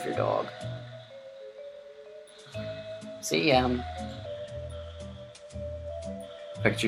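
From 0 to 4.26 s, the sound suffers a wrong sample rate. It runs about 1.09 times too fast and sits roughly 1.5 semitones sharp. That fits 44.1 kHz material played back at 48 kHz without conversion, so speed and pitch rise together.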